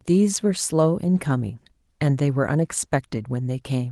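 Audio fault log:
No faults detected; the speech carries full-band Opus coding at 24 kbps in hybrid mode, with only light coding artefacts.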